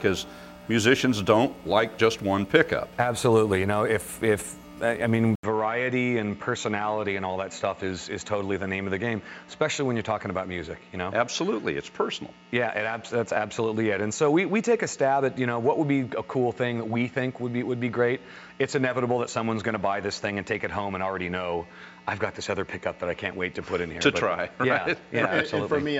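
Input switched to a poorer device at 5.35 s: after an 80 ms silence, the sound turns duller and somewhat quieter with a new noise floor, nothing above 7.6 kHz, likely a change of microphone.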